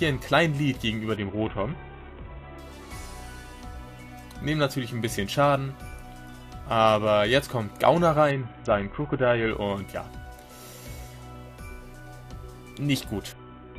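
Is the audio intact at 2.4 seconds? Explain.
No. A Bluetooth SBC bit pool drop runs from 1.16 to 2.58 s. The link squeezed the codec's bit budget, which fits a fall from 28 to about 5. The top sub-bands lose their bits, so treble dulls and gritty noise rises.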